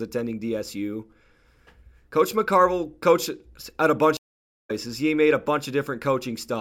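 At 4.17 s, just after "coached at a bunch", the connection breaks and the player reconnects with a fresh decoder mid-stream, a stream reconnect. The speech drops into 0.52 s of silence, then picks up roughly 0.4 s further along, fading in briefly.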